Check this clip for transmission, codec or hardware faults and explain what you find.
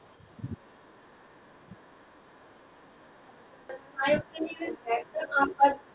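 Two faults come through in this speech clip: echo leakage across the whole recording and several short suppression dips during double talk. The audio stops at 4 kHz, which fits a narrowband G.711-style call path.

Other side's voice leaking through, 0 to 5.9 s: the echo canceller is likely failing to cancel the far end's loudspeaker sound picked up by the microphone. The result is a second voice coming through, about 5 dB louder than the talker.

Speech suppressed in double talk, at 2.65 to 2.69 s, 2.9 to 2.98 s, 3.77 to 4.04 s, 4.22 to 4.26 s and 5.26 to 5.32 s: with both sides talking, the canceller likely turns everything down rather than separate them. The talker's voice briefly sinks by a few to around 15 dB, most deeply in the longest dip near 3.8 to 4.0 s.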